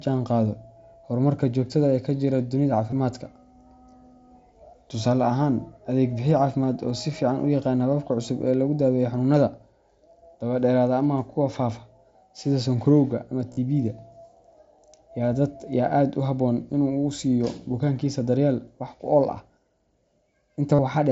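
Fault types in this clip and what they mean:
Concealed Bluetooth headset packet loss: a short 15 ms loss at 2.91 s, then two brief buzzy tones held at full level, 13.53 to 13.57 s right after "faafa sida sonkorowga ama" and 20.75 to 20.79 s, each ending in a slight warble as the real speech resumes. Packets between headset and phone went missing, and the receiver filled each gap by repeating the best-matching stretch of the audio just before it, so the 45 ms and 37.5 ms gaps become a held buzz.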